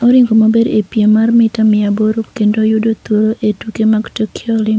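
Speech carried over a call path with nothing above 8 kHz, which fits a G.722 codec at 64 kbps, with room noise sitting about 41 dB below the speech, and no technical faults present.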